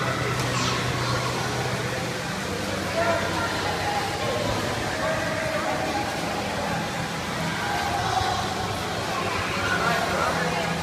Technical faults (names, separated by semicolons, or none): none